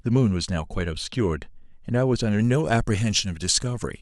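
From about 2.39 s to the end, the speech turns suddenly thin and bright, with the s sounds getting sharp and hissy. That's pre-emphasis left on: the top end was lifted with what sounds like a standard 50 µs FM curve, and the matching de-emphasis never got applied on the way back out. So the highs stay boosted, roughly 11 dB up at 10 kHz compared with 1 kHz, and the whole thing tilts toward treble.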